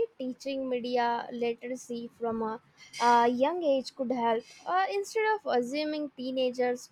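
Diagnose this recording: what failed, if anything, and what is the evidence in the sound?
Nothing failed here: the speech comes through without any audible fault at any stage, so there's nothing to diagnose.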